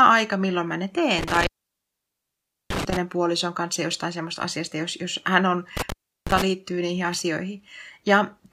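At 1.19 s, right after "milloin mä ne", the speech drops out from an intermittent contact: a loose cable or plug breaks the signal path for about 1.24 s, with crackle as the connection makes and breaks, and the disturbance runs to 2.97 s. It recurs at 5.77 s after "jos jos hän on", this time open for about 0.35 s, and the speech returns by 6.42 s with "liittyy niihin".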